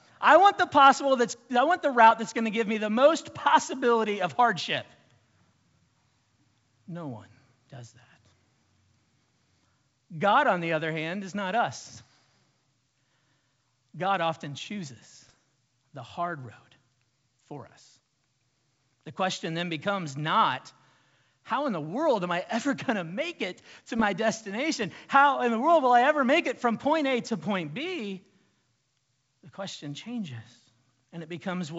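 Bit errors on an ADPCM link hit this speech at 2.11–2.17, 15.27–15.34 and 23.98–24.05 s. Flipped bits upset the decoder's step size, causing brief pops and rough bursts, worst at 15.3 s.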